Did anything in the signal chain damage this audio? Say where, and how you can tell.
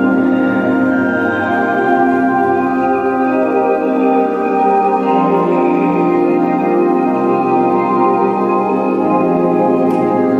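Yes: a block size mismatch (truncated) at the buffer stage, throughout. Discarded block tails cause a 43.1 Hz buzz, seen as evenly spaced vertical spectrogram stripes, which fits 1024-sample blocks.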